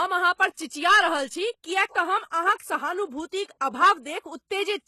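From start to finish the speech has gritty, metallic s sounds, with nothing above 12.3 kHz. The likely cause is HE-AAC compression at a rate consistent with 16 kbps: treble rebuilt from copied lower bands, harmonics no longer lining up.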